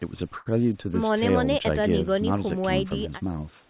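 At 0.38 s there's a short stall from a late packet, running to about 0.48 s. A packet didn't turn up in time, the jitter buffer ran dry, and the receiver held the last bit of speech for roughly 78 ms until the packet arrived, then carried on from the same spot. Nothing is lost, but that sound gets stretched, with a faint buzz or dip. It all sits inside the narrowband call sound topping out at 4 kHz, which fits G.711.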